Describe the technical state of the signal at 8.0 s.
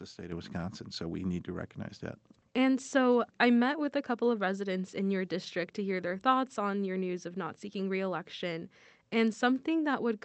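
At 8.0 s the signal is still inside a sudden gain jump that began at 0.32 s and runs to the end: speech and background noise sit together about 7 dB louder than before, likely from a digital gain step applied without a ramp, over a call-codec band topping out near 8 kHz.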